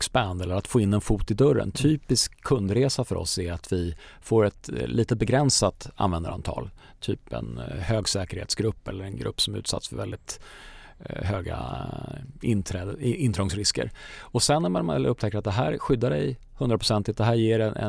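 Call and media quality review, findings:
No faults found in this speech recording. Nothing to escalate; ticket can close with no findings.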